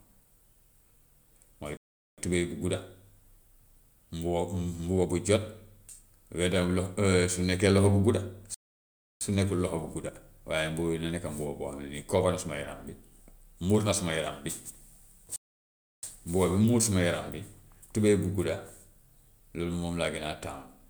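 At 1.77 s the speech cuts out for about 0.41 s, then again from 8.54 s for about 0.67 s, resuming on "su nekkul", and from 15.36 s for about 0.67 s. Each is a playback stall, likely the player starving for data or its thread blocking, so output drops to silence mid-flow before continuing. On a waveform each gap is a flat line; on a spectrogram, a clean vertical blank band across all frequencies.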